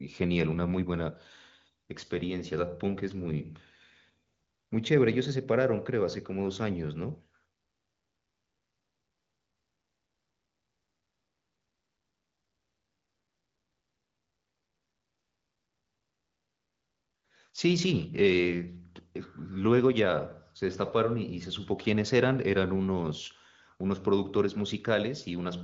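The speech comes through the AMR wideband (HD Voice) codec at a rate that fits 23.05 kbit/s, with content stopping around 7.5 kHz as that path produces, and no technical fault can be heard anywhere in it.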